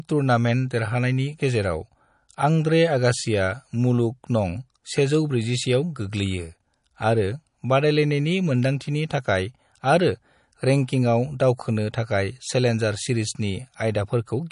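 Throughout the speech, MP3 compression likely ran short of bits, which fits an encoder at around 40 kbps. It cut everything above 10.5 kHz and dropped weak frequency lines frame by frame, leaving the voice dull, watery and swirly, with smeared consonant attacks and metallic, chirpy s sounds.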